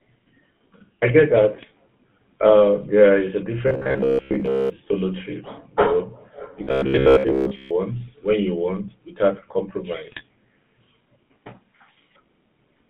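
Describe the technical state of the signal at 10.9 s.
GSM full-rate codec damage is present at 10.9 s, as it is across the whole clip. The speech is rebuilt from a vocal-tract model driven by coarse pulse excitation, giving a buzzy, gravelly roughness consistent with 13 kbps coding, confined to roughly 150 Hz to 3.6 kHz.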